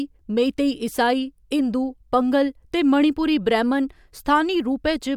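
Listening through the recording, nothing stood out as a technical fault at any point.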